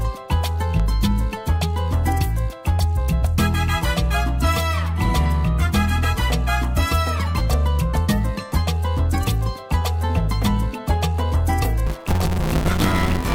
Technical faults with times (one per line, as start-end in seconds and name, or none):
0.80-0.82 loud pop
11.86-13.35 buffer tearing